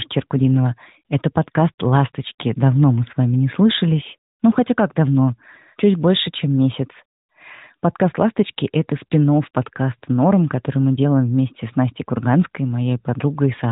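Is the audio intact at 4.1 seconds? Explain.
Yes, the audio is intact at 4.1 seconds, with the speech carried through the AMR narrowband mobile codec path as normal at this moment, its band topping out around 3.8 kHz.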